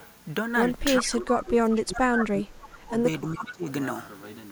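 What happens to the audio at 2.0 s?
At 2.0 s the speech is being pulled down by what is likely speech suppressed in double talk, running from 0.99 to 3.69 s. The echo canceller turns down the talker along with the far side's echo, with dips of up to about 25 dB over roughly two seconds in total. Just before, from 1.95 to 1.99 s, a brief echo leak lets through a delayed copy of the speech, about 410 ms late and about 15 dB below it, likely residual loudspeaker pickup.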